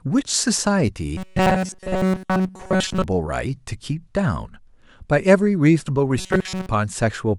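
Audio likely arrived too seldom, so playback kept looping a tiny slice, about 5.3 ms, in place of most of the real signal. From 1.17 to 3.04 s and again from 6.18 to 6.69 s, this robotic sound from repeated short buffers imposes a rigid, metallic 188 Hz buzz on the speech.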